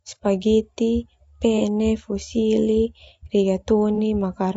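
Throughout this speech recording there is plainly audible low-delay AAC compression, likely AAC-ELD, the codec common in video calls, at a rate consistent with roughly 32 kbps. At this low bitrate the coarse coding makes the voice sound rough and grainy. On a spectrogram, noise fills the gaps between harmonic stripes and the top band looks thin or patchy. Twice there is AAC frame loss with concealment, from 1.58 to 1.62 s and from 3.95 to 3.99 s. Each gap is about 30 ms, consistent with a single missing frame that the decoder patched from the previous good spectrum. Each sounds like a brief smeared, phasey blip. On the spectrogram it shows as a narrow slice where the harmonic detail blurs into noise or repeats the preceding column. In the waveform there is a short stretch with the right level but a jumbled shape.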